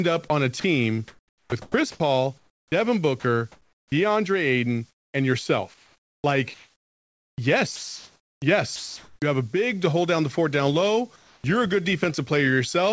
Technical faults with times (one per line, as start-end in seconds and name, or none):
0.28-3.92 sound chopped by the voice detector
4.90-5.14 comfort noise in place of the background
5.74-9.22 sound chopped by the voice detector
11.16-11.44 sound dropped by the voice detector